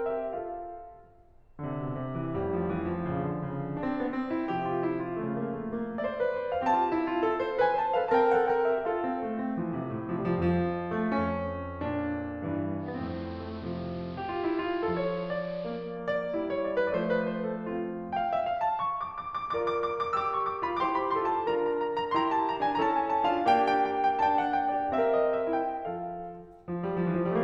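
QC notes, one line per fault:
12.78–16.01 s, digital radio blending to analogue: the music dulls, losing treble, with hiss about 25 dB below the music and a drop of about 1 dB, as the receiver cross-fades over 281 ms to the AM broadcast and back.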